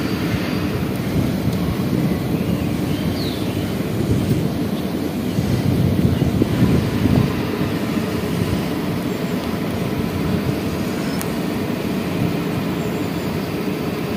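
No technical faults are audible.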